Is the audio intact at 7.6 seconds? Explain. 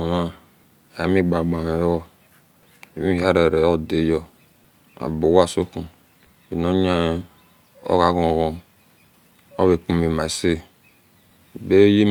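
Yes, at 7.6 seconds the speech runs through intact, with no dropout, click, distortion or other fault at that moment.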